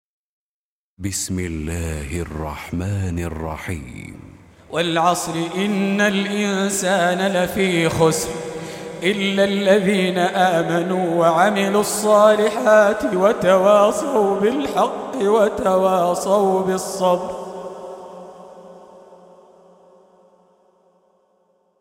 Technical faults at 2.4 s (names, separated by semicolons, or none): none